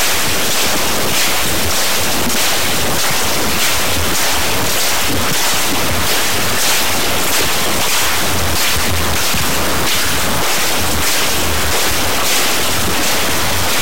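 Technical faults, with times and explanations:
Throughout, stuck bit: the audio carries a harsh, buzzy distortion, with quiet passages filled by loud noise. The likely cause is a data bit held at a fixed value, shifting about half the samples by a large step, roughly -10 dBFS, in a waveform-dependent pattern.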